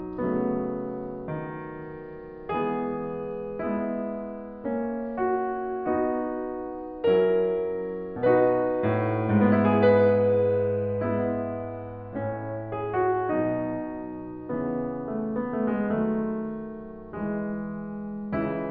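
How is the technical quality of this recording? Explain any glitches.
Nothing glitchy turns up anywhere in this music recording, so there's no fault to explain.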